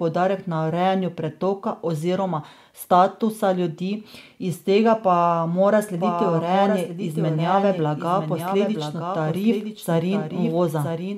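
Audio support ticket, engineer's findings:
Doubled audio track from 5.98 s to end. Full-band copy, roughly a second late, somewhat quieter, starts abruptly. Likely a slower second capture path.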